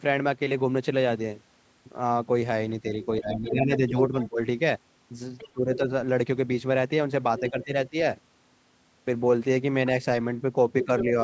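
From 2.82 to 4.4 s the speech dips in pieces, down by roughly 10 dB at its worst. This is speech suppressed in double talk. A second, fainter voice runs under it from 3.02 to 4.28 s, about 15 dB below the speech. This is the other side's voice leaking through. Both sides were likely talking at once. The echo canceller could not tell the local talker from the loudspeaker echo, so it attenuated everything while letting some of the far-end signal pass.

The same pairing returns three more times. From 5.38 to 5.77 s, leaked far-end sound sits about 15 dB down. The speech drops by around 15 dB from 5.53 to 5.81 s. From 7.38 to 7.89 s there is leakage at a similar level, with suppression of roughly 15 dB from 7.41 to 7.95 s. These dropouts are short rather than sustained.

At the end, 10.82 to 11.05 s, the leaked voice is much stronger, only about 5 dB under the speech. The suppression from 10.86 to 11.13 s is light, a dip of around 5 dB.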